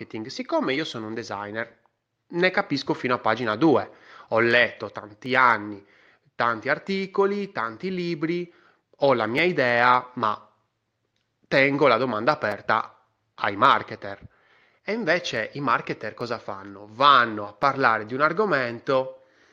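Sharp, isolated clicks cut through the speech at 5.26, 9.38, 12.52, 16.21 and 17.63 s. Each is a single tick with nothing around it. These are most likely dropped samples. A tiny slice of the stream, well under a millisecond, goes missing. The waveform then jumps straight to a later value. That step makes the click. The gap is too brief to remove any audible sound. In a spectrogram each one would show as a thin vertical line.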